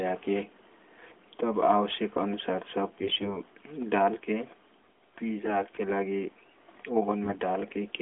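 AMR bit errors hit the speech just after "तब आवश्यक अनुसार", from 3.00 to 3.39 s. They return briefly from 5.44 to 5.59 s and from 7.24 to 7.37 s. A few percent of the weakly protected codec bits arrived flipped, and the last burst is somewhat denser. The excitation pulses land in the wrong places, and the fine pitch, gain and spectral values are off. Pitch and level hold, but the voice turns hoarse, scratchy and gargly for those moments.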